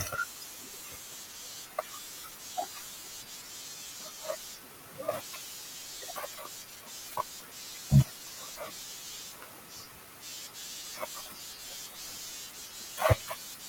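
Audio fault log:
9.76–9.83 s, DAB burbling: a brief burbling over the speech for about 75 ms, which fits roughly four MP2 frames. Bit errors at around a fifth of a percent slipped past error correction, corrupting the MP2 audio data so single sub-bands carried short blips of noise.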